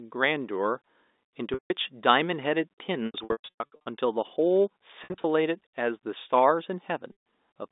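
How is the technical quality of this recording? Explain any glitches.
The speech is marred by packet loss with pitch repetition at four points: 1.54–1.70 s, 3.06–3.86 s, 5.04–5.24 s and 7.12–7.15 s. Packets went missing, and the receiver filled each gap by repeating the last pitch period while fading it down. The longest stretch, around 3.1–3.9 s, is scattered loss totalling 540 ms, with runs up to 120 ms. That produces a choppy string of buzzy, held fragments. The shorter gaps sound like brief frozen tones that dip and recover. The narrow telephone band comes from G.711 coding.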